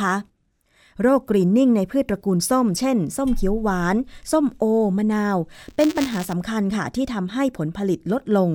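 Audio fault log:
5.53–6.33 s, buffer tearing: the speech takes on a robotic 200 Hz buzz, which fits a 5 ms buffer period. In each period the read and write positions cross, so a small sliver of every buffer carries audio from roughly 20 ms earlier, spliced in with hard joins on both sides. Unlike dropouts or isolated clicks, this buzz is steady and pitched at the buffer rate, and it follows the speech, present only while sound is playing.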